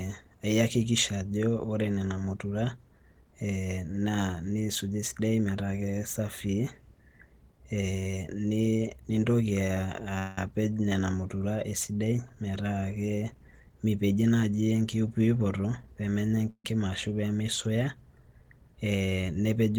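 The speech clip has two call audio freezes, at 10.18 to 10.38 s and 16.50 to 16.65 s, where the last sound is stretched into a fading buzz or hiss for 188 ms and 145 ms, the second ending in about 60 ms of silence. This is likely a jitter buffer running dry while packets were held up. A spectrogram shows smeared, frozen harmonic bands thinning out, then a blank strip in the second case, before speech resumes with nothing lost. A jitter buffer speed-up from 13.51 to 14.84 s makes speech run at about 114% with unchanged pitch, sounding hurried, as a fifth of a second of pitch periods is trimmed. A waveform shows syllables packed closer together, while harmonic spacing in the spectrogram stays the same.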